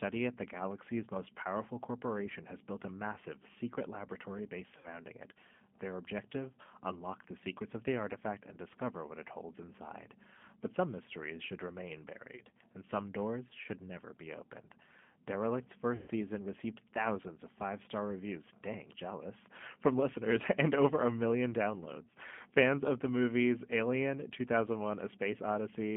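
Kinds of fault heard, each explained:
G.729 codec: The whole clip has the rough, slightly synthetic quality of a low-rate model-based speech coder, consistent with 8 kbit/s G.729. Speech is rebuilt from a vocal tract filter and pulses, so it stays intelligible but grainy, confined to roughly 150 Hz to 3.4 kHz.
VoIP packet loss concealed by the speech codec: Three dropouts where the decoder guessed forward from its last pitch and filter, giving a buzzy, fading smear: about 60 ms lost at 4.78 s, 20 ms at 12.36 s, and the worst, 120 ms, at 15.96 s, with the voice weak until 16.1 s.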